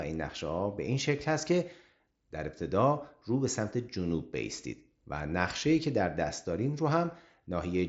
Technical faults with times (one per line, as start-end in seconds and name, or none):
none